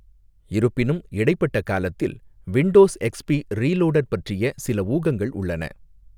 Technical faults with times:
none

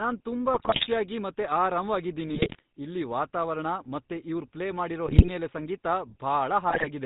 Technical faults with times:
0.00-7.06 GSM full-rate codec
0.54-0.87 GSM bit errors
2.26-2.62 GSM bit errors
5.06-5.29 GSM bit errors
6.70-6.87 GSM bit errors

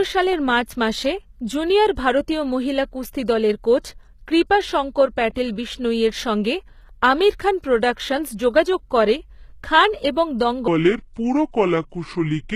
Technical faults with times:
0.00-12.56 HE-AAC compression
10.68-12.56 section at the wrong speed

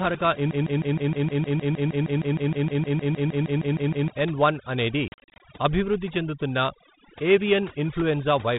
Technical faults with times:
0.00-8.58 overdone noise removal
0.51-4.10 broken-record loop
5.08-5.41 packet loss on an ADPCM call

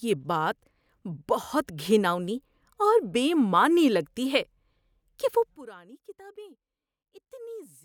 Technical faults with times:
5.56-7.84 one channel inverted

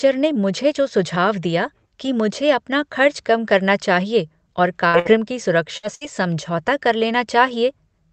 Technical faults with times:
4.87-5.08 burst of packet loss
5.77-6.04 burst of packet loss

